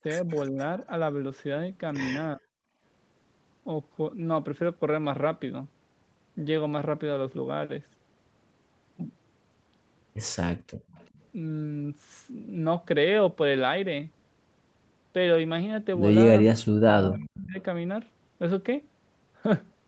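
At 0.29 to 0.37 s a faint repeat of the speech slips through, trailing the original by 376 ms at about 35 dB below it. This is an echo leak, likely from a loudspeaker on the far end whose echo canceller let part of the pickup escape and sent it back. On a spectrogram it appears as a weak smear mirroring the earlier speech pattern shifted 376 ms later. The waveform barely shows it.

From 0.51 to 0.57 s the speech sags briefly, by roughly 10 dB over a few tens of milliseconds. At 2.35 to 2.44 s it almost vanishes for about a tenth of a second. This is speech suppressed in double talk, likely because the canceller mistook overlapping talk for echo and turned everything down. The waveform shows a pinched notch in the envelope, and the spectrogram shows a vertical gap where the harmonics fade.

At 2.72 to 2.78 s the room background dips by about 10 dB for a brief moment. At 10.76 to 10.90 s it falls by about 35 dB for a sixth of a second or so. 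In both cases the background was gated by the echo canceller, which clamped the microphone hard while the loudspeaker played. Against a spectrogram that stops at 8 kHz, the noise floor shows a clean dark band, and the waveform sinks, close to silence in the second case, then recovers.

Right after, from 10.90 to 11.21 s, the echo leak returns for longer, again 376 ms behind and about 35 dB down. It is audible as a ghostly shadow of the speech.

The longest fault runs from 16.5 to 17.58 s. Speech suppressed in double talk drops the speech by up to roughly 40 dB in broken pieces totalling about a second, heard as choppy, hollowed-out syllables. Inside that stretch, at 17.37 to 17.43 s, a stronger echo leak at about 20 dB below the speech pokes through, 376 ms delayed. It appears as a bright fragment inside the spectrogram's gap.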